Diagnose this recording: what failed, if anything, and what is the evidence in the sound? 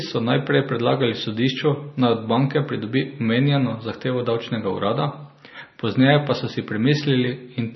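The codec stage failed: the speech has been squeezed through a likely MP3 encoder starved of bits, with damage that fits a bitrate somewhere around 26 kbps. Throughout the recording nothing survives above 5.9 kHz, where the encoder cut the treble off outright. Below that, weak frequency lines drop in and out from frame to frame, giving a watery, swirling texture. S sounds turn metallic and chirpy, and consonant attacks lose their crispness.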